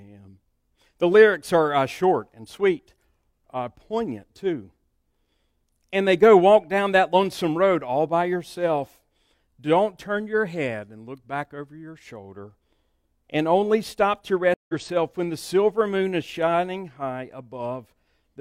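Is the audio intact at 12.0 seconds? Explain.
Yes, the speech plays through cleanly at 12.0 seconds, with no dropout, glitch or distortion at that moment.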